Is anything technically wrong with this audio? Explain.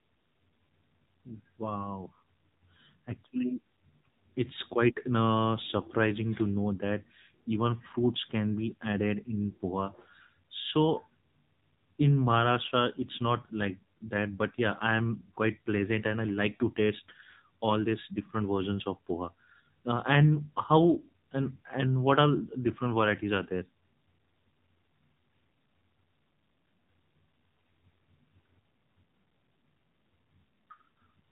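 Yes. The speech runs through an AMR narrowband mobile codec for its whole length. Nothing above 4 kHz survives. The codec drives a vocal tract model with a pitch predictor and a few pulses per 5 ms. Damage is plainly audible: a buzzy, synthetic voice that fits a low mode near 7.4 kbps.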